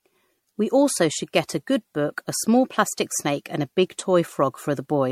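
Throughout the speech there is generation loss: swirly, smeared, hollow sound with blurred onsets, likely from about four successive MP3 encodes near 64 kbit/s, each requantising on a shifted frame grid. A spectrogram shows patchy holes and nothing above 16.5 kHz.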